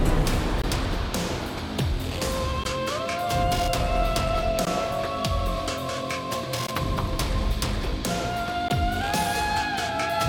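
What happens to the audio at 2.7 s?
At 2.64 s there is a gap at a join of encoded pieces, about 16 ms long and recurring every 2 s. Each piece kept its encoder's start delay and padded last frame. It appears as a brief vertical gap in the spectrogram and a narrow dropout in the waveform before the sound resumes where it stopped.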